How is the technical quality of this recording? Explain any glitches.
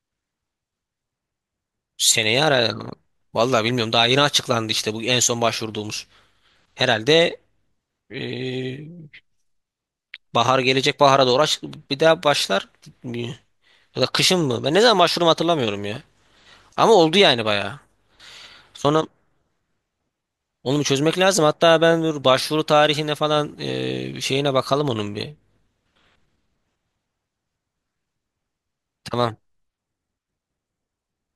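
Nothing here calls for explanation, since there's no technical fault to point to anywhere in the recording.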